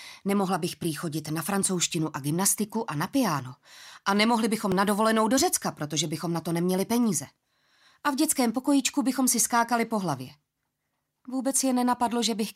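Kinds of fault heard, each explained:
Repeated buffer: twice, at about 2.16 s and 4.72 s, a tiny slice of about 1.3 ms plays again, which fits a 64-sample buffer, so each sounds as a click or brief buzz rather than a stutter. Unlike a dropout, nothing seems missing.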